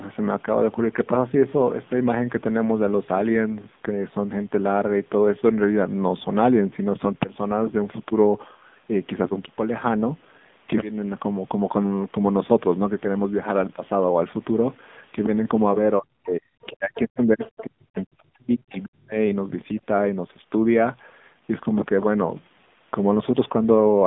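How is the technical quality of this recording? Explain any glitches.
The recording is narrowband mobile-call speech with audible coding damage throughout and a troubled stretch from 15.99 to 19.17 s.

AMR narrowband mobile codec: The whole clip is band-limited to roughly 150 Hz to 3.6 kHz, with nothing above 3.7 kHz. The pulse-driven vocal-tract model produces plainly audible buzzy, synthetic coloration, which fits the 7.4 kbps mode.

Speech suppressed in double talk: From 15.99 to 19.17 s, about 3 s of the talker's speech dips, falling by up to about 40 dB. The likely cause is an echo canceller attenuating everything during simultaneous talk.

Other side's voice leaking through: From 16.95 to 16.99 s and 17.42 to 17.64 s, faint fragments of a second voice appear, about 15 and 20 dB below the speech. This is likely residual loudspeaker echo.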